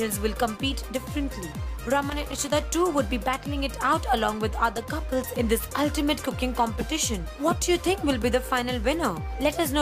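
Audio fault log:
2.09–2.63 s: loose connector crackle. An irregular burst of scratchy crackle lasting about half a second, produced as a worn or dirty contact in the signal path repeatedly opens and closes, chopping the audio and adding pops wherever DC sits on the line.
4.76–4.83 s: loose connector crackle. A much shorter burst of about 70 ms from an intermittent contact, where a brief shift of the connection breaks the signal for an instant and leaves a quick scratch.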